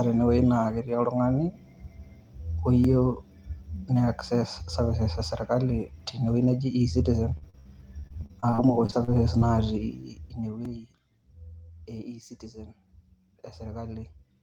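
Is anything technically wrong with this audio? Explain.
Yes, there are three distinct problems in this speech clip.

First, a repeated buffer, twice. At 2.84 s a tiny slice of about 2.9 ms plays one extra time, and at 10.65 s the same thing happens with two extra plays. The device didn't get fresh audio in time and replayed its last block, which fits a 128-sample buffer. Because the block is so short, you hear a small click or a brief buzz rather than an obvious stutter.

Second, from 7.37 to 9.43 s there's repeated packet loss, which gives that robotic sound. Audio keeps arriving late or not at all, and each hole gets papered over by stretching the last bit of sound before the next one hits. Sixteen gaps land in that two-second stretch, the longest about 58 ms, and roughly a fifth of the span is concealed. The result is choppy, robotic-sounding speech with bits missing.

Third, zipper noise from 9.91 to 11.01 s. 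The level drops by around 15 dB, but the change is applied in a couple of hundred raw steps a second with no smoothing. Each step puts a tiny click in the waveform, so a fine ticking or zipping rides on the speech while the level moves down.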